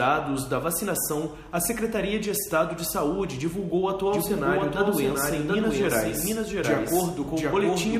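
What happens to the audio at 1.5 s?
Nothing goes wrong at 1.5 s, and the audio passes through that moment intact, with no dropout, click or other glitch.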